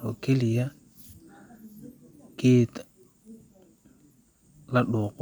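Nothing stood out as a technical problem on listening to the speech.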